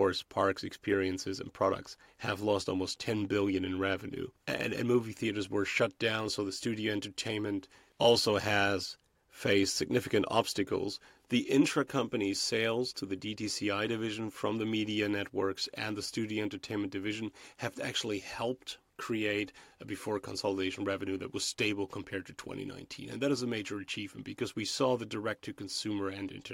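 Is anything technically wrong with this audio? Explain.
Yes. From 0.13 s to 26.5 s, clock slip clicks tick roughly every 30 ms, a faint rattle on louder speech, likely from unsynchronised device clocks about 700 ppm apart.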